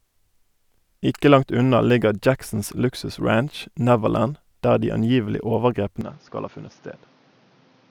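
From 6.01 s to the end, right after "der de angivelige", the speech abruptly turns duller and a little quieter, losing everything above 6.8 kHz, with a new noise floor beneath it. This is likely an input switched to a poorer device mid-recording.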